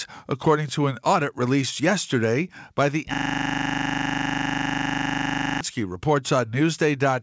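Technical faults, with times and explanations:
3.14 to 5.61 s: system hang loop. The system froze, so one 40 ms piece of sound repeats exactly at 25 Hz, giving a steady mechanical buzz.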